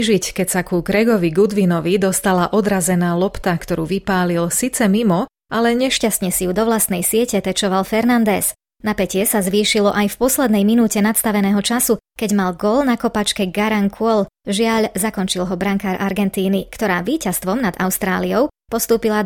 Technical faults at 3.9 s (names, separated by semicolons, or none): none